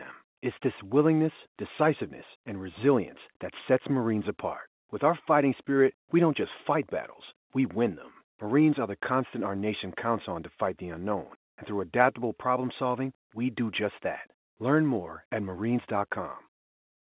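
No technical faults occur at any point in the speech, which comes through a mu-law telephone channel.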